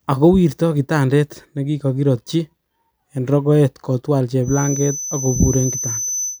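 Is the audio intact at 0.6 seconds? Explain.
Yes, at 0.6 seconds the speech is intact, with no fault audible at that moment.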